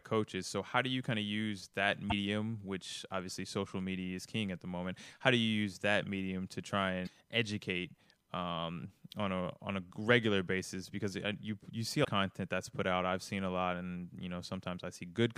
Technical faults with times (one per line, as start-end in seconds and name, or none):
2.08-2.12 damaged data in a compressed stream
7.04-7.09 damaged data in a compressed stream
12.01-12.05 damaged data in a compressed stream